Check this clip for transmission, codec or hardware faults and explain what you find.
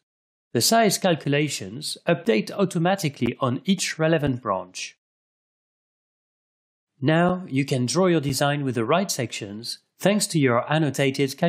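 There's one fault here: gaps between stream segments, at 1.24, 2.25, 3.26, 4.27 and 7.29 s. The segments run on a one-second spacing, and their timestamps don't quite meet, so the player pads each seam with roughly 6 to 12 ms of silence. You hear short, hard-edged dropouts ticking along regularly, though nothing is actually lost.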